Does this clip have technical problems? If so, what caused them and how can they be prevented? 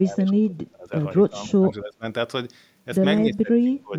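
Yes. Speech suppressed in double talk: the echo canceller likely could not separate this talker from loudspeaker echo while both sides spoke, so it turned everything down. The speech dips by up to about 20 to 25 dB from 0.0 to 0.93 s, 1.26 to 2.05 s and 3.22 to 3.98 s. Better echo-path modelling with a double-talk detector that holds adaptation rather than attenuating prevents this.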